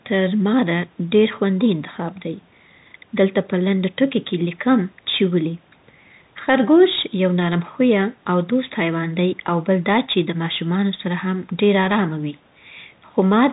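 Speech carried throughout by the Bluetooth CVSD headset codec, which fits a 64 kbps one-bit link whose adaptive step cannot track loud high-frequency content. The damage is plainly audible: nothing passes above 4 kHz, sibilants turn scratchy, loud peaks distort, and granular hiss sits underneath.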